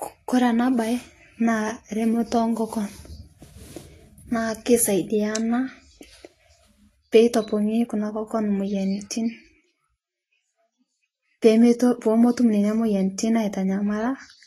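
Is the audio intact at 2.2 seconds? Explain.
No. At 2.2 seconds the speech carries the same damage heard across the whole clip, most likely Vorbis compression at a low setting, consistent with roughly 29 kbps. Nothing sounds above 14.2 kHz, and the coarsely quantised treble turns fine detail into hiss and grain, roughening tones and blurring consonant onsets.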